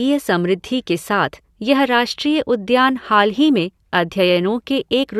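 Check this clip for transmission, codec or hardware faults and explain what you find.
No faults are audible anywhere in this speech.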